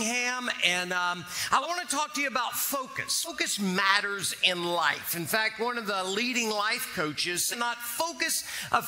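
At 1.62 s, 3.24 s and 7.51 s the audio lurches forward, a short discontinuity where material simply goes missing. These are compressed frames skipped: whole frames were never played, either absent from the file or rejected by the decoder as damaged. The first two drop around 150 ms, consistent with about three frames of roughly 42.7 ms each. The third drop loses around half a second, which points to about fifteen frames.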